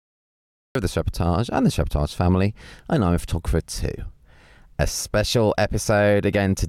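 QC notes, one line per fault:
0.00–0.75 s, cut-off start: the clip opens in dead digital silence, then the speech snaps in abruptly at 0.75 s, mid-sound, right before "of the", with no natural attack or fade-in, because recording began after the talker had already started.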